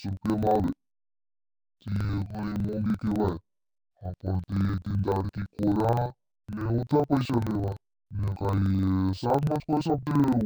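Speech, and the whole thing has the classic interleaved-audio-read-as-planar problem. Each chunk of alternating left and right samples has been split down the middle instead of de-interleaved, so each half plays at half speed. The pace still tracks, but the voice sits a full octave low, sounds doubled, and chops along at about 23.4 Hz. That's a 42.67 ms block, which fits a 2048-sample block.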